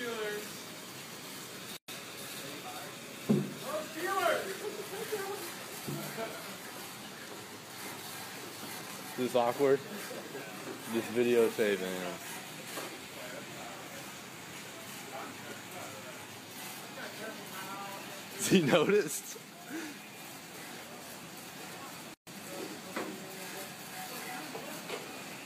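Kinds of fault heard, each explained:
Gap at a join of encoded pieces: chunks encoded separately got stitched together untrimmed, so the encoder's lead-in silence and end padding stay in. It shows as holes with smeared edges, of 115 ms at 1.77 s and 130 ms at 22.14 s, then the sound carries straight on.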